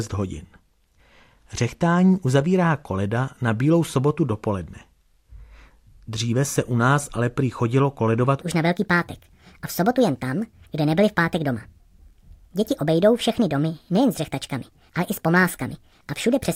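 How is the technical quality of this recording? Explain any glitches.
The recording has one clear glitch: a section at the wrong speed. From 8.41 s to the end, the speech runs 1.41 times too fast, likely because that portion was played back or resampled against the wrong clock. Speed and pitch shift together, so the speech jumps about seven semitones higher and sounds hurried and chipmunk-like.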